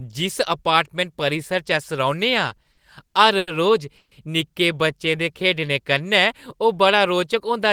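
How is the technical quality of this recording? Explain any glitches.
Two network glitches stand out in the middle of the speech, close together.

From 2.49 to 3.49 s there are repeated stalls (stutter): six short hangs, the longest 90 ms, about 220 ms held in all. Packets were arriving late, so the jitter buffer kept running dry and the receiver stretched the last sound. Nothing's lost, but that second drags and stutters.

Then at 3.97 s there's a call audio freeze lasting to 4.13 s. The sound hangs as a fading buzz for about 140 ms, going silent for the last 40 ms, then picks up where it stopped, running 140 ms behind. Likely packets held up in transit emptied the buffer.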